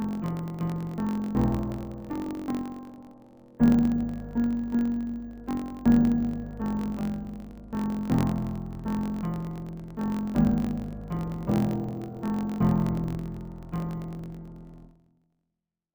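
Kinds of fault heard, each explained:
Interleaved audio read as planar: each 21.8 ms block of alternating left-right samples gets split into halves and stretched, so the sound runs an octave low and doubled, with a choppy buzz at about 46 Hz from the block rate, throughout.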